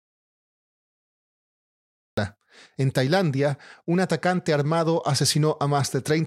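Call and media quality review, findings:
Audio dropout to silence from the top through 2.18 s, dead silence with no room tone, speech cuts in mid-flow. Likely input link or mute dropping while the recorder kept writing.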